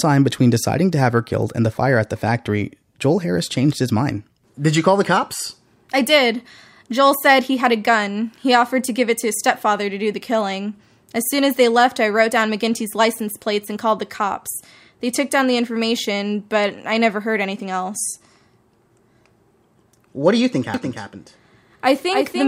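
At 20.74 s, just after "do you think", a doubled audio track cuts in and runs to the end. A second full-band copy trails about a third of a second behind, a few decibels quieter, likely from a slower capture path. Unlike an echo, it starts abruptly, with no decay or room colour.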